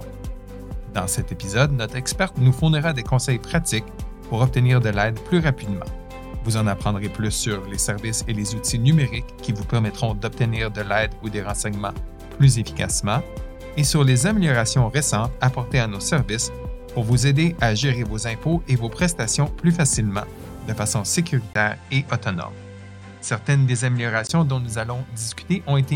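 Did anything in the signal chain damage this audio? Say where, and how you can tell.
Yes. From 21.53 to 24.29 s the top end vanishes above 9.2 kHz after a 20 ms gap, with a new noise floor about 45 dB down and no level jump. This likely means the input switched to a poorer device. A spectrogram shows a flat ceiling and a brief blank column at 21.53 s.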